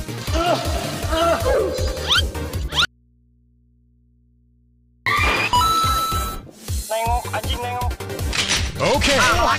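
At 2.85 s the sound cuts abruptly to an audio dropout leaving a faint residue of mains hum, roughly 35 dB below the signal, until 5.06 s. The likely cause is a lost input with the downstream path still live. On a spectrogram, thin low horizontal hum lines cross an otherwise empty 2.2 s gap.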